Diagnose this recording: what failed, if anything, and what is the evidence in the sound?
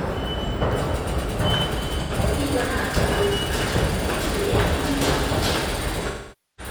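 Codec stage: AAC frame loss with concealment. At 2.01 to 2.12 s, an 85 ms smeared, noisy patch fits two lost frames rebuilt from the last good spectrum. From 6.02 s to the end, 512 ms of concealment decays toward silence, fitting twelve lost frames.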